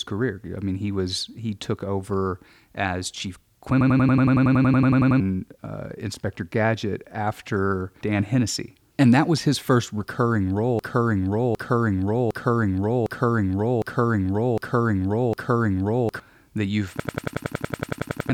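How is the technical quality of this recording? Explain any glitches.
The recording has three looping glitches of two kinds, which seriously damage its technical quality.

From 3.81 to 5.20 s and from 17.00 to 18.30 s there is a system hang loop. A frozen system let the hardware replay one 93 ms chunk, which fits a 4096-sample buffer, 14 to 15 times. The result is a 10.8 Hz machine-gun stutter that appears as identical repeating blocks on the waveform and evenly spaced vertical stripes on a spectrogram.

From 10.79 to 16.20 s there is a broken-record loop. A 757 ms fragment repeats seven times back to back, likely because the player or stream stalled and kept resending it. The waveform shows identical copies, and the speech that should have played there is lost.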